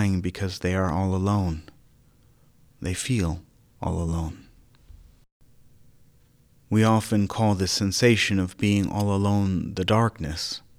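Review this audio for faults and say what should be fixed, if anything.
Nothing stood out on listening to this speech recording, so there is nothing here to fix.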